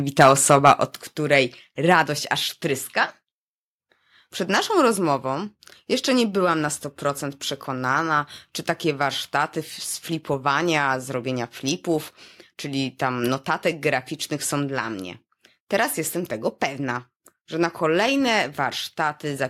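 From 0.19 to 0.72 s, microphone overload, likely from input gain set about 4 dB too high, drives speech peaks past the converter's limit. A small share of samples are flattened, giving the loudest syllables a harsh, crackling edge. The microphone volume then steps down, likely the call software cutting input gain, at 1.02 s by about 4 dB, at 2.04 s by about 3 dB just before "aż tryska", and at 4.92 s by about 2 dB. Each step makes speech and background abruptly quieter.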